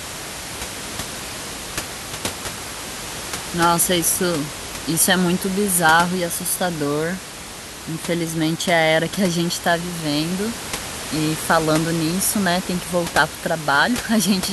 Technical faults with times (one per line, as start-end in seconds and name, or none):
none